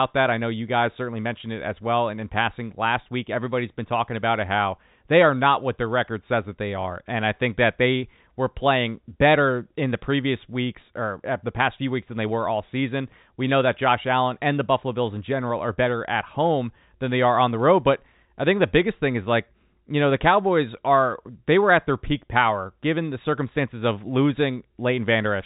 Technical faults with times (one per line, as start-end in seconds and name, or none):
none